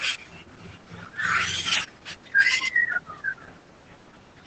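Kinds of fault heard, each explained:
Opus voice compression: The speech passes through Opus's SILK linear-prediction coder, and the damage is plainly audible. Nothing reaches above 8.9 kHz, a wideband limit. The excitation is coded coarsely, leaving the voice muffled, hoarse and slightly robotic, which fits a 12 kbps stream.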